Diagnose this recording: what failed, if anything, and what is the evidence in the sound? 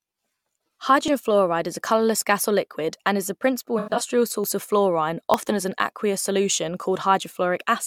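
The capture path's driver or buffer stage is the likely culprit: the application missed its read deadline and the hardware overwrote unread samples, a dropped buffer (overrun). The audio is spliced straight across the gap with no silence, so each event is a jump forward in the sound. At 1.08 s, just before "fluoride is", roughly 70 ms vanishes. Smaller skips of about 20 ms occur at 4.44 s, just before "of fluorine", and at 5.34 s.

At the codec stage, AAC frame loss with concealment hits from 3.78 to 4.01 s, right after "the principal". About 149 ms of coded audio is missing, scattered across a 213 ms stretch, with the longest continuous run around 100 ms. Rather than leaving gaps, the decoder synthesises replacements from the last good spectrum, which is why this stretch sounds smeared and noisy instead of clean or silent.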